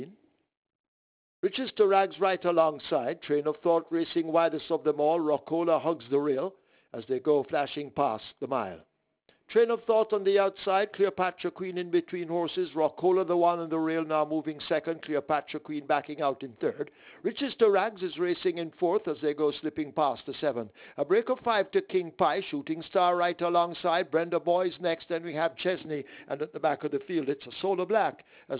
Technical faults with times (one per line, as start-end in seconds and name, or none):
0.00-28.59 aliasing